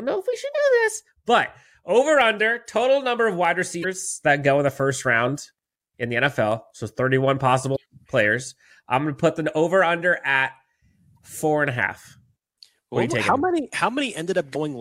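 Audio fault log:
0.51–0.56 s, 3.80–3.85 s, 7.72–7.77 s, 11.16–11.18 s and 14.51–14.56 s, damaged data in a compressed stream: corrupted bytes in the compressed speech made the decoder misread those frames, lose sync and hunt for the next valid header. Each time this gives a brief chirp or blip of 20 to 46 ms, after "know if we should", between "total number of wide" and "that go in the", and just before "players I'm going to".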